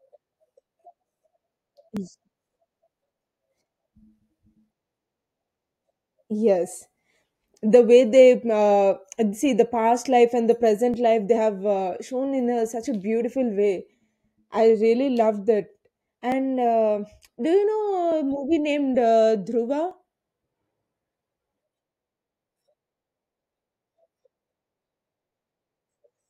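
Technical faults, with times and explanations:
0.18–25.29 s, clock drift buffer slips: there's a click roughly every 1.79 s, around fifteen in all, heard as the speech runs. It's likely two devices on separate clocks, off by something like 700 ppm, with a block of around 70 samples dropped or repeated at each slip.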